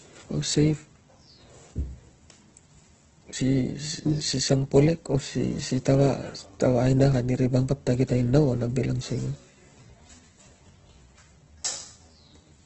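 From the start, the speech carries heavy Opus compression damage: nothing sounds above 8.1 kHz, and the band energy that remains turns grainy and rough where fine detail should be. This points to a low-rate music-mode encode, likely Opus at around 12 kbps.

At 9.33 s, right after "tainau a bil ang", a time-stretched section begins and runs to the end of the clip at 12.66 s. The pace drops to about two-thirds speed while the pitch holds, and the speech drags, likely from software stretching to fit a length.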